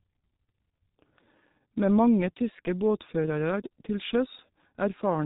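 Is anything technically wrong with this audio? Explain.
Yes. The speech passes through a G.723.1 codec for its whole length, and the damage is heavy. Nothing is left above about 3.8 kHz, so the speech sounds muffled and boxed in. The codec works in 30 ms frames and refreshes its model of the voice slowly. Fast changes get smeared. Consonants blur together, and the voice takes on a hoarse, rough edge. The thin result points to a very low bitrate of around 6 kbit/s.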